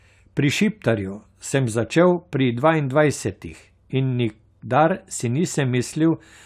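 No technical faults are audible.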